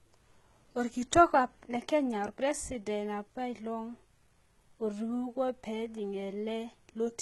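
From start to end, the s sounds are gritty and lispy and the treble has a metallic sheen, with nothing above about 11.8 kHz. Heavy damage like this likely comes from HE-AAC compression at a low bitrate near 16 kbps, which rebuilds the upper band from copied lower harmonics.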